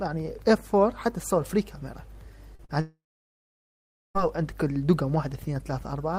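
At 2.55 s and again at 2.65 s, about 40 ms of audio fails to reach the decoder in time: short concealed packet loss. The receiver fills each gap by extending the preceding sound and then blending back, leaving two quick smears or wobbles close together.

From 2.81 s to 4.17 s the stream stops arriving, most likely a long network dropout, and about 1.34 s of audio is lost. The last sound carries on briefly as a fading buzz or hiss, then about 1.15 s of silence follows before the audio resumes further on, with the missing part never heard.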